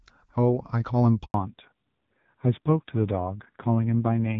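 At 1.24 s the call is handed over between networks, and for about 100 ms no speech frames arrive. The speech dies away almost at once and the line sits silent until 1.34 s, when the new link picks up; whatever was said in that gap is gone.

From 1.34 s to the end, the call falls back to narrowband. The light wideband coding heard before the switch, which fits AMR-WB at 12.65 kbit/s, gives way to an older codec. Nothing above 4 kHz remains, and the speech turns dull and rough, consistent with AMR-NB at around 5.9 kbit/s.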